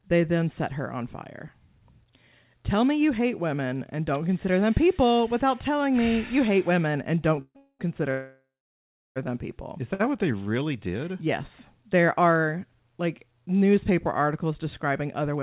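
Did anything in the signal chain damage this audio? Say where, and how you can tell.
Yes. The damage is in the network and jitter-buffer stage of a call path. The band stops at 4 kHz, which fits a 64 kbps G.711 A-law codec.

Call audio freeze, likely from packets held up in transit so the jitter buffer ran dry. At 7.41–7.57 s and 7.57–7.81 s the last sound is carried on as a fading buzz or hiss, then about 50 and 60 ms of silence. From 8.11 to 9.18 s the hold lasts 1.05 s, with 0.69 s of it silent, before "them people" resumes. Nothing is lost, but each wait becomes an inserted gap.

Short stall from a late packet, at 9.94–10.01 s. One packet missed its playout slot, so the receiver stretched the last sound by about 57 ms and then picked up from the same point. The syllable there hangs on slightly too long, with a faint buzzy dip, and no content is dropped.

Jitter buffer slow-down, 10.06–10.65 s. 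Right after that stall the buffer was running low or had just raised its target delay, so the receiver repeated single pitch periods and bits of pause to rebuild it, adding 71 ms. Over that stretch the speech runs at 89% speed while the pitch stays the same. Sounds are drawn out.

Jitter buffer speed-up, 14.50–15.37 s, between "are like newspaper" and "women being". Here the buffer held more audio than its target, so the receiver trimmed short pitch-period slices, around 70 ms in total. The speech plays at 108% speed with unchanged pitch and sounds a little hurried.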